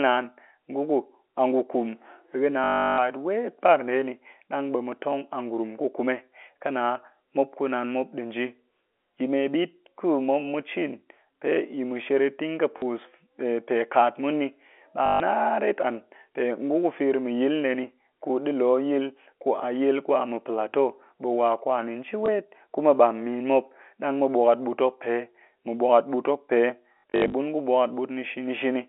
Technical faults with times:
2.64-2.98 packet loss with last packet repeated
12.78-12.82 packet loss with last packet repeated
15.06-15.20 packet loss with last packet repeated
22.26 packet loss with last packet repeated
26.98-27.34 packet loss with last packet repeated

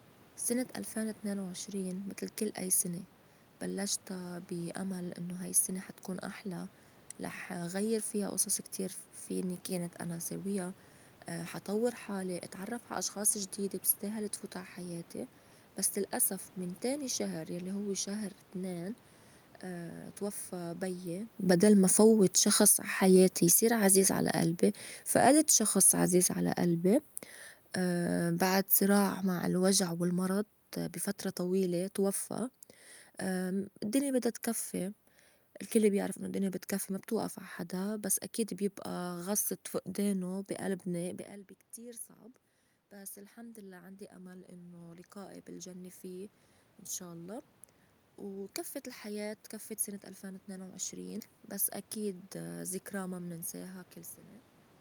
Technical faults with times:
21.35-36.15 automatic gain falling
41.76-53.93 automatic gain rising

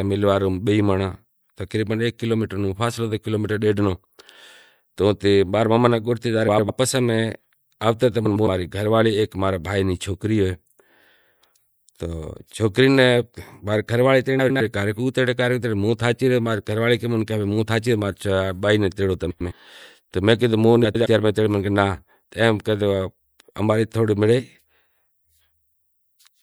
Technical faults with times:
6.47-6.70 frames out of order
8.25-8.47 frames out of order
14.39-14.61 frames out of order
19.30-19.52 frames out of order
20.84-21.06 frames out of order

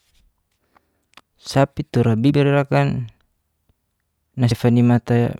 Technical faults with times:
0.71 compressed frames skipped
2.29 compressed frames skipped
4.50 compressed frames skipped

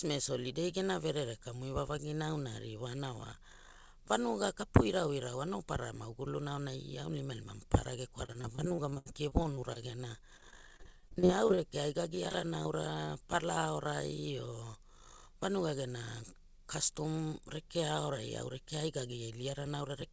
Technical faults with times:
8.26-9.77 repeated packet loss (robotic sound)
10.37-11.60 repeated packet loss (robotic sound)
12.16-12.67 repeated packet loss (robotic sound)
13.05-13.09 short concealed packet loss
13.66-14.00 jitter buffer speed-up

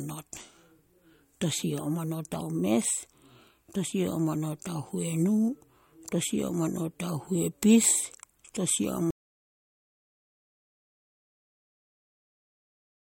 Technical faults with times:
9.11-13.01 audio dropout to silence

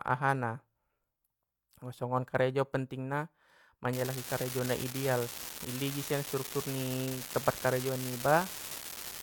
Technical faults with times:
3.93-9.22 unreliable data bit

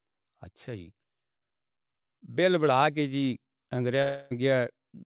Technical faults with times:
4.02-4.33 long network dropout

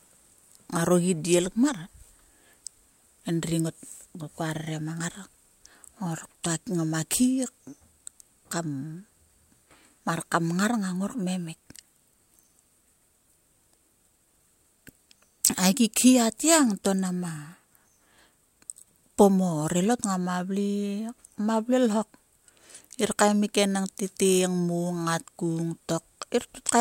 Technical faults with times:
none

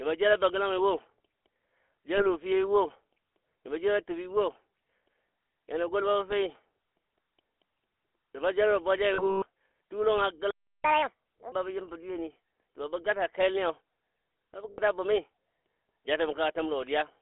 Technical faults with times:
0.00-17.22 GSM full-rate codec
2.18-2.27 lost GSM frames
9.14-9.47 lost GSM frames
10.51-10.84 playback stall
10.84-11.52 catch-up at higher speed
14.70-14.80 lost GSM frames

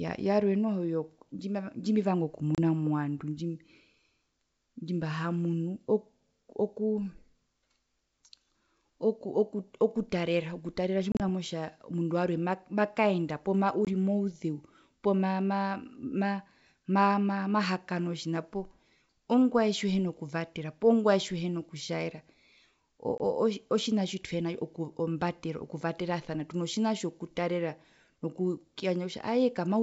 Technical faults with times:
2.55-2.58 packet loss on an ADPCM call
11.12-11.21 packet loss on an ADPCM call
13.85-13.89 packet loss on an ADPCM call
23.18-23.21 packet loss on an ADPCM call

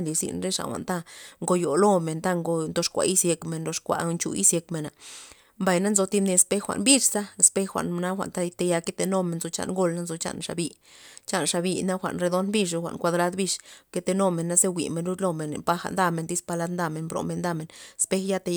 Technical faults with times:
none

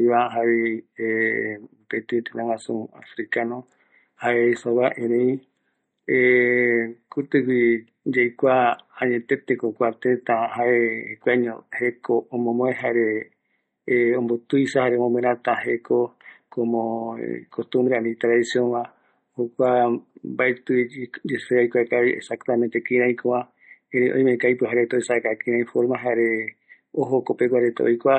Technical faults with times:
0.00-28.19 MP3 compression

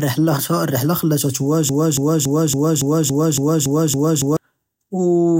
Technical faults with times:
1.69-4.37 broken-record loop

